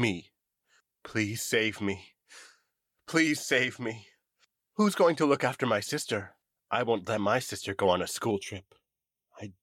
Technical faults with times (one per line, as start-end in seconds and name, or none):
8.31-9.63 channel delay (comb filtering)